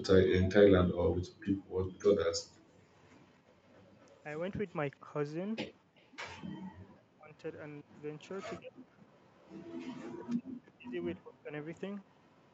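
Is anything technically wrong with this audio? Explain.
Yes, two things. There's echo leak at 2.98–4.23, 5.97–6.07, 7.95–8.28, 9.25–9.5 and 11.77–12.2 s: a faint delayed copy of the speech, around 250–270 ms late and roughly 35–40 dB down, likely from a far-end speakerphone whose echo canceller didn't catch everything.

There's also speech suppressed in double talk: a slight dip at 5.0–5.09 s, then deep drops of up to about 40 dB spread across 6.44–11.54 s. That's likely the canceller turning down this talker while the other side spoke.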